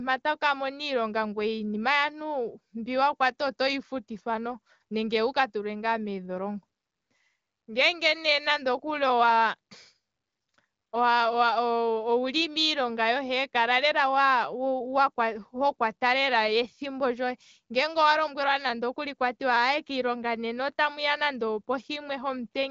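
No technical faults can be heard anywhere in the speech. It carries the mild texture of the AMR wideband (HD Voice) codec at a comfortable rate, with little audible codec damage and nothing present above about 7.5 kHz.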